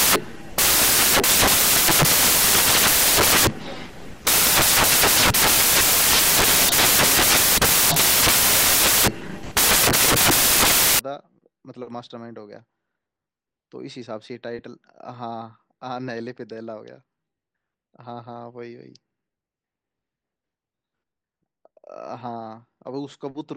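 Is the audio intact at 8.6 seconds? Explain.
No. At 8.6 seconds the speech is still inside a stretch of samples built from the wrong bytes, running from the start to about 10.99 s. Each sample is assembled with its bytes misaligned or swapped, so the rapidly fluctuating low-order bits end up as the dominant part of the value, and the result is loud, harsh broadband noise.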